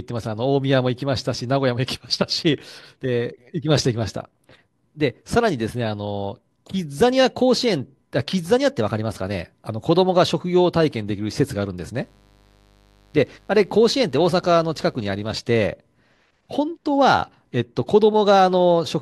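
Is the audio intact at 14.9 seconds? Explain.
No. From 11.96 to 15.40 s, mains buzz gets in: interference from the 50 Hz supply enters the signal path as sharp spikes twice per cycle, spreading harmonics into the kilohertz range. At 14.9 s this is heard as a steady, raspy buzz sitting well beneath the speech.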